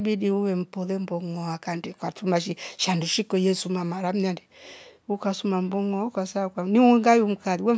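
Speech, with no technical faults to report.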